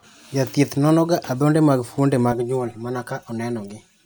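From 2.32 s, right after "nonoga adhonde mag fuonde", and continuing to the end, the speech turns hollow and phasey. This is channel delay causing comb filtering. One channel runs roughly 5 ms behind the other, and when the two are summed to mono, cancellations fall near 100 Hz and then at regular steps above it. Because the notches stay fixed and evenly spaced, it differs from a flanger's moving sweep and from a low-pass filter's uniform loss of treble.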